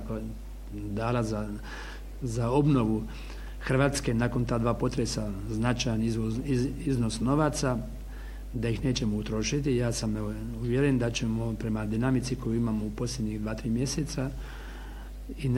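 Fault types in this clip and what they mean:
Mains hum: a steady low tone at 50 Hz, the European power-line frequency, present from start to finish. Current from the mains supply is leaking into the signal path, most plausibly through a ground loop between connected equipment or magnetic coupling from a nearby transformer. Here the hum is strong, sitting roughly 10 dB below the wanted audio, so it forms a constant drone underneath everything rather than a faint background buzz.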